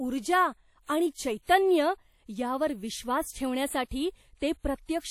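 From start to finish, the speech carries plainly audible codec damage, likely from WMA compression. Its transform blocks spread quantisation noise over tens of milliseconds around each sound. The result is a ringing, washy texture. A hiss rises and falls with the speech. Weak spectral detail has been dropped, and nothing remains above about 19.1 kHz. The degree of damage fits a low bitrate, around 48 kbps.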